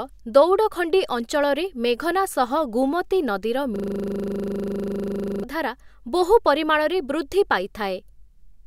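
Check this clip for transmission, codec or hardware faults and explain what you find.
One hardware fault stands out in this speech clip.

A system hang loop runs from 3.76 s to 5.43 s. The playback system stalled while the audio hardware kept replaying the last 40 ms of its buffer, which suggests a ring buffer of about that size. The same slice of speech cycles about forty times at 25 Hz, so for nearly 1.7 seconds the speech gives way to a rigid, rattling buzz at that rate before normal audio resumes.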